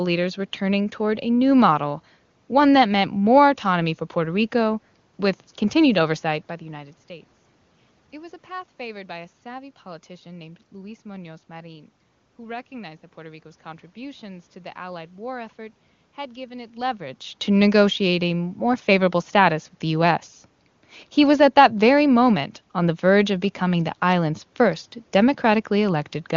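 No technical faults can be heard anywhere in the clip.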